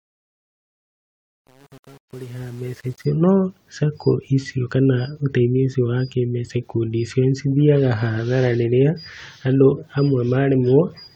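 Over the fade-in, 0 to 3.1 s, there's truncation distortion: the speech comes up gritty, which fits an undithered 8-bit stage.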